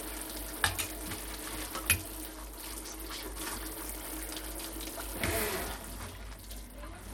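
Throughout, the treble flickers and drops out under a gritty, aliased haze, likely Bluetooth SBC compression at a low bit pool, fitting roughly 96 kbps, starving the upper sub-bands.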